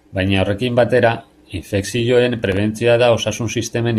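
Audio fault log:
2.39–2.57 s, processor overload crackle, just after "horrekin batera infekzioen". About five short buffers, around 3 ms each, drop to silence. The hard-edged gaps make a brief gritty crackle.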